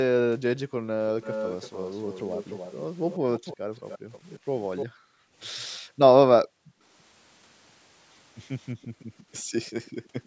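The background sound in this speech clip keeps getting pumped down. From 0.65 to 0.83 s the room tone drops by up to about 40 dB for a brief moment. That's background gated by the echo canceller: while the far end is playing through the loudspeaker, the canceller clamps the mic hard and then lets go. From 1.22 to 4.86 s a delayed copy of the voice trails the speech by 297 ms, quietish at maybe a tenth of the level. That echo leak is most likely a loudspeaker-side canceller failing to strip what its mic picked up. Within that stretch the gating hits again at 3.57 to 3.71 s, down about 40 dB. From 4.86 to 6.82 s comes the longest gated spell: the background ducks out for around a second in total, about 40 dB deep. A tiny faint scrap of echo slips through at 5.73 s, again 297 ms behind. From 8.80 to 9.25 s the background dips by about 32 dB for a few tenths of a second. From 8.82 s to the end the echo returns, very faint and now 328 ms late. 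One last gated dip of about 40 dB runs from 9.91 to 10.24 s. Across the clip the call's mic processing limits the top end to 8 kHz, as you'd expect.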